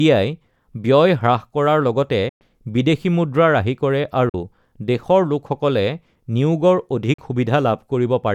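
Bluetooth dropouts cut this speech clip at 2.29 s for about 116 ms, and at 4.29 s and 7.14 s for about 44 ms each. The sound stops abruptly and resumes as if it had played on, likely because wireless audio packets arrived too late and were discarded.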